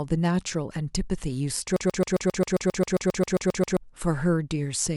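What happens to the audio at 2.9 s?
At 2.9 s the speech is caught in a broken-record loop running from 1.76 s to 3.77 s: a fragment about 0.13 s long repeats back to back, 15 times, giving a rapid stutter in place of the speech that should have played. The likely cause is a stalled player or stream re-sending its last held chunk. On a waveform the identical block tiles exactly; a spectrogram shows the same slice stamped repeatedly at regular intervals.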